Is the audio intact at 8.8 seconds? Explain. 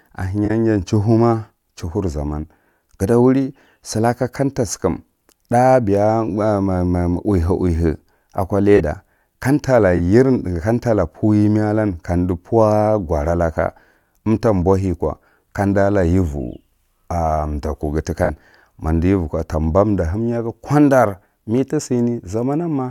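No. A corrupt frame concealed fault sits at 8.76 to 8.81 s. Flipped bits spoiled the AAC data, roughly two frames' worth, and the decoder caught it and covered the gap itself.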